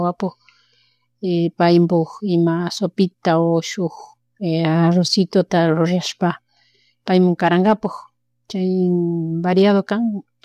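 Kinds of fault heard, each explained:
No technical faults can be heard anywhere here.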